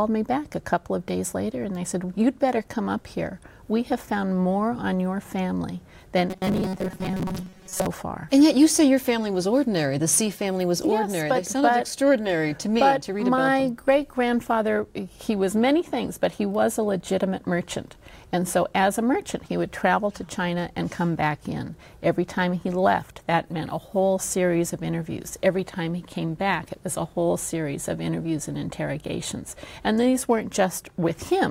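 From 6.30 to 7.87 s the sound turns into a rigid, metallic buzz locked at 188 Hz, still loosely tracing the contour of the audio underneath. This is robotic sound from repeated short buffers. The likely cause is new audio arriving too seldom, so playback keeps looping the most recent fragment of roughly 5.3 ms, one period of that buzz, to fill the gaps. Most of this stretch is repeated material rather than fresh audio, and the skipped portions are lost.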